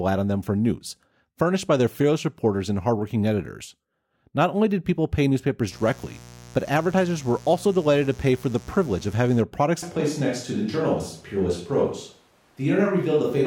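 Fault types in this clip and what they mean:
mains buzz: Sharp switching spikes from a dimmer, rectifier or unshielded run get into the signal twice per mains cycle, so they carry a dense stack of 60 Hz harmonics reaching into the kilohertz range. It enters just after "only did people pay" at 5.69 s as a steady, raspy buzz sitting roughly 20 dB below the speech, and it holds until 9.45 s, where it stops.
switch to a distant microphone: From 9.83 s to the end, the speech changes abruptly to a roomy, hollow sound with thinner low end, as if picked up well away from the talker. The likely cause is that the close microphone dropped out and a farther one, such as a camera microphone, took over. Overall level stays about the same, but room noise comes up to roughly 35 dB below the speech.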